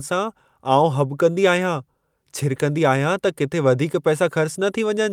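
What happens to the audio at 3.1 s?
Nothing goes wrong at 3.1 s: the speech carries straight through that moment with no dropout, click, distortion or other audible fault.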